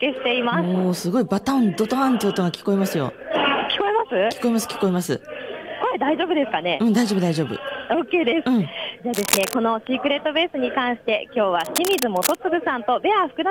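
Two short bursts of cable scratch noise sit over the audio, from 9.14 to 9.57 s and again from 11.60 to 12.41 s. Each is a dense, uneven rustle only slightly quieter than the signal, roughly 5 dB below it. The likely cause is a worn cable, connector or control being moved, with its contact resistance jumping about. Unlike steady crackle or isolated clicks, the noise comes in clumped bursts that start and stop with the disturbance.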